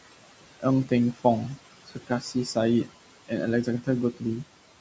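Across the whole clip there are noise suppressor artifacts. The room noise sits about 14 dB below the speech, and the suppressor estimates it band by band and pulls those bands down by about 18 dB in each frame. The background therefore drops away in the pauses and comes back underneath the talking. The call microphone processing leaves nothing above 8 kHz.

From 1.87 to 2.35 s there is speech cut by the noise suppressor. In this stretch it misjudged low-level parts of the speech as noise and attenuated them along with the background, by about 15 dB at the deepest point. Only around a fifth of a second within that window is affected, but those quieter sounds come across as swallowed and faint.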